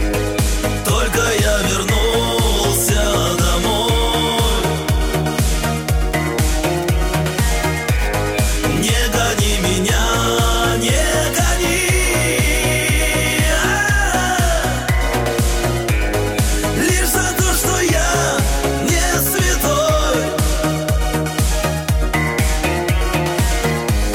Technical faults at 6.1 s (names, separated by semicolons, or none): Wi-Fi interference